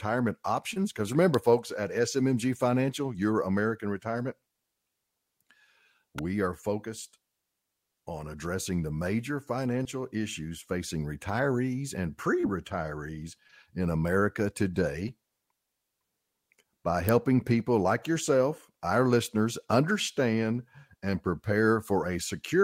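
Sharp snaps hit the speech at 1.34 s, just before "folks at", at 6.18 s before "are focused", and louder at 17.09 s before "people like yourself". These are electrical switching spikes, likely from a nearby switch arcing into the audio line.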